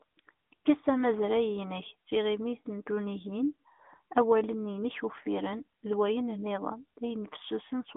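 From start to finish the speech carries the sound of an AMR narrowband mobile codec. The band is confined to roughly 200 Hz to 3.6 kHz, with nothing above 3.8 kHz, so sibilants and consonant detail are dulled and the low end is thin. The codec rebuilds the voice from a vocal-tract model excited by a few pulses per 5 ms subframe, and the plainly audible buzzy, synthetic edge fits a mid-rate mode around 10 kbps.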